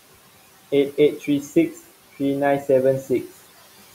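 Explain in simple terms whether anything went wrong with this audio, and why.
Noise suppressor artifacts run through the whole clip. A noise-reduction stage keeps judging which parts of the sound are steady background noise and turns those down moment by moment, so the faint room noise sinks in the pauses and comes back up whenever someone talks.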